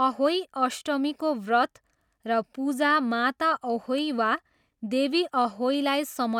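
No technical faults are audible anywhere in the speech.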